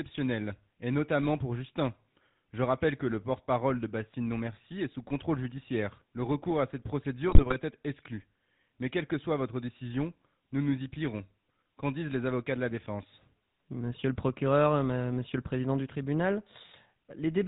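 Throughout, the speech has a buzzy, gravelly roughness with nothing above 4 kHz, the plainly audible sound of the GSM full-rate codec, which fits its 13 kbps regular-pulse excitation. From 7.29 to 7.53 s, between "recours à cette" and "être exclu", the speech breaks into squawks and gargling: GSM bit errors corrupted the decoder's filter, pitch and gain values.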